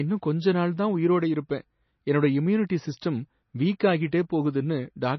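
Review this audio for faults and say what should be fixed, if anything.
Throughout the speech there is a hard ceiling with nothing above 6 kHz, and the sound is watery and swirly, with sibilants breaking into metallic chirps and consonant attacks smeared. This is likely MP3 compression, heavily applied. Short of bits, the encoder chopped the treble at a fixed point and kept dropping quiet frequency lines in and out between frames, which fits a bitrate around 24 kbps. On a spectrogram this shows as a flat shelf at 6 kHz with blank space above it and speckled, flickering holes below it. Fix it by recording or exporting at a much higher MP3 bitrate, or better, in an uncompressed or lossless format.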